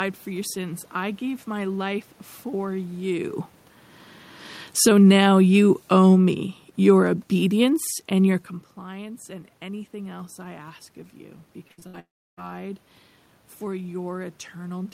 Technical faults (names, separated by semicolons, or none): automatic gain falling; automatic gain rising; repeated packet loss (robotic sound); long network dropout